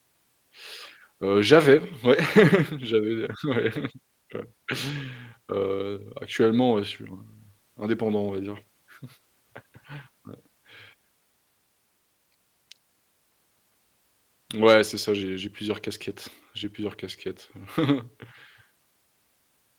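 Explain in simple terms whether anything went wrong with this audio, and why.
One short spot around 3.75 to 3.77 s has a lost packet rebuilt from error correction. A small piece of the speech went missing in transit, which fits a single lost packet, but the next piece carried a rough backup copy of it. The player used that backup, so there is no silence or gap. The 20 ms that were filled in sound rougher and noisier than the speech around them.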